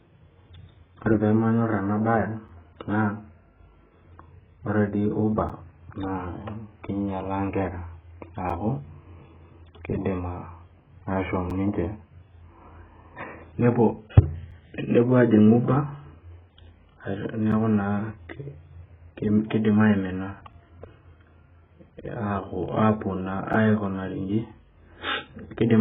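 Heavy compression, likely AAC-LC at a rate near 8 kbps, strips everything above 3.7 kHz, leaving the speech dull, smeared and warbly throughout. A gap between chunks, where silence is inserted at each 3-second join, cuts 7 ms holes at 2.48, 5.49, 8.50, 11.50, 14.51, 17.52, 20.52 and 23.53 s.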